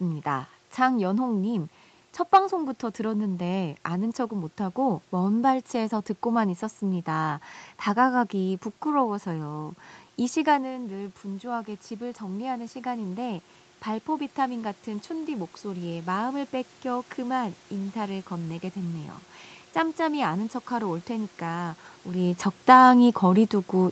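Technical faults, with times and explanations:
10.66–17.99 s automatic gain rising: The talker moves away around 10.5 s, dropping the input about 10 dB. The gain control slowly adds about 7 dB. Voice and room noise swell together.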